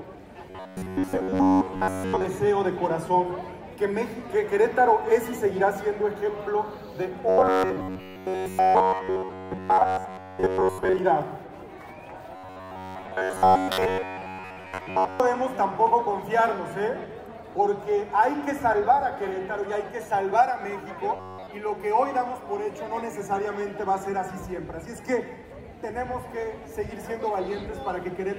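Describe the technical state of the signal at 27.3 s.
Nothing is wrong with the signal at 27.3 s; the audio there is intact.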